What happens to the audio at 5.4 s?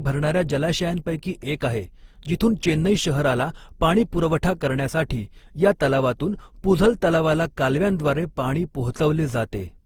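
At 5.4 s you're hearing generation loss, though it's not a moment-specific glitch; it runs through the whole speech clip. The sound is swirly, smeared and hollow, with consonant attacks blurred, more degraded than a single pass at what sounds like around 48 kbit/s Opus would give. The likely cause is repeated lossy re-encoding, something like seven passes, each requantising on a shifted frame grid so noise piles up. The band itself still reaches about 20.3 kHz.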